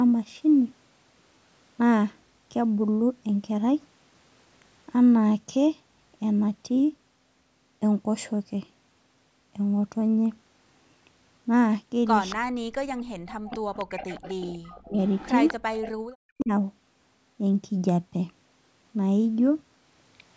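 Around 12.3 to 12.35 s, 12.98 to 13.03 s, 13.53 to 14.52 s and 15.07 to 15.92 s there's an echo leak: a faint copy of the speech trailing 256 ms behind, from about 15 dB down to about 35 dB below it. It's likely a loudspeaker on the far end whose echo canceller let some pickup through. Interleaved with those, at 12.35 to 12.61 s, 13.01 to 13.62 s, 14.52 to 14.97 s and 16.01 to 16.51 s, the speech is suppressed in double talk, dipping by as much as about 40 dB in chunks of a few hundred milliseconds. The likely cause is the canceller ducking everything while both sides overlap.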